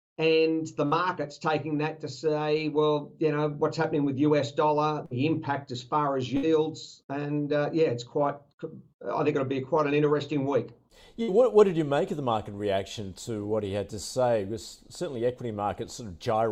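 Bursts of packet loss occur at 0.85–0.94 s, 5.05–5.14 s, 6.37–6.46 s and 11.23–11.31 s in this audio. Each time, about 60 ms of sound never arrived in time, so the receiver stretched the last received sound across roughly 55 to 59 ms while fading it down. Playback then picks up further along, with that stretch of the original missing.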